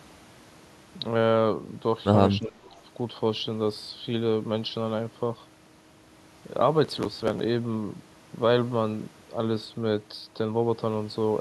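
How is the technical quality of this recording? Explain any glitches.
The recording has two brief glitches close together, both around 2.4 to 2.8 s.

From 2.39 to 2.62 s the speech dips by up to about 20 dB for roughly a fifth of a second. The likely cause is speech suppressed in double talk: with both sides talking, an echo canceller turned down the local talker along with the echo. A packet-loss gap would drop to hard silence instead.

From 2.64 to 2.80 s a very faint copy of the voice comes back, delayed by 305 ms. This is likely an echo leak, where loudspeaker sound the canceller missed was sent back down the line. It is a distinct, late repeat, not the smooth decaying tail of room reverberation.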